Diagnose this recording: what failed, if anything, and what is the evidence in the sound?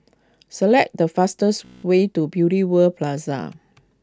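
A system hang loop runs from 1.65 to 1.84 s, at the driver or buffer stage: one 16 ms slice of speech repeats exactly 12 times, giving a steady 62.5 Hz buzz. The host froze while the hardware kept cycling a ring buffer, which fits a 256-sample buffer.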